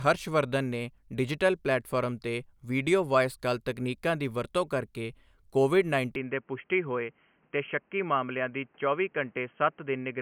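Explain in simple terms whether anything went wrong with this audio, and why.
At 6.16 s, after "ਵਰਤੋਂ ਕਰ ਕੇ ਕੋਵਿਡ", the speech abruptly turns duller, quieter and slightly noisier. This is likely an input switched to a poorer device, a sudden change rather than gradual muffling.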